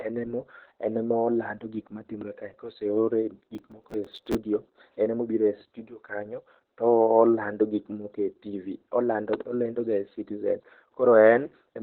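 Throughout, the speech carries Opus voice compression at 8 kbps in SILK mode: the band is narrowed so nothing reaches above about 4.1 kHz, and the excitation is coded coarsely, leaving a muffled, hoarse, slightly robotic tone. Unlike simple low-pass filtering, the texture itself is degraded.

From 3.55 to 4.35 s, processor overload crackle rides over the speech. Dozens of deadlines are missed in a row, each brief gap refilled with stale audio at hard edges, which fits buffers of around 5 ms. The result is a gritty tearing burst, not a single click or dropout.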